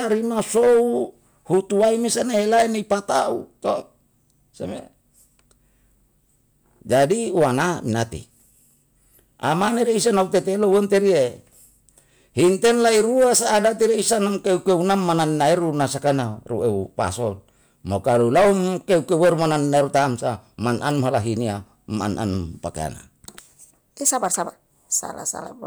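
Hard clipping runs through the whole speech clip: about 9 dB of overdrive flattens peaks, roughly two percent of samples, producing crackle on peaks, flat-topped waveform peaks and spectrogram harmonics smeared upward.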